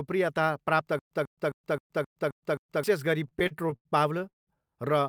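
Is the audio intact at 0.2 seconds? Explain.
Yes, the audio is intact at 0.2 seconds, with no dropout, distortion or other fault at that moment.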